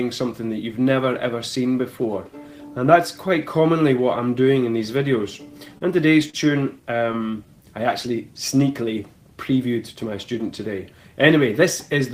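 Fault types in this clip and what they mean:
Repeated stalls (stutter): Between 5.65 and 6.37 s the sound stumbles four times as packets arrive too slowly and the jitter buffer keeps running dry. Each pause is bridged by extending the last sound, about 81 ms in all, the longest 40 ms, roughly 11% of that stretch. Unlike packet loss, nothing is skipped. The audio resumes exactly where it left off, so it drags and hiccups rather than jumping ahead.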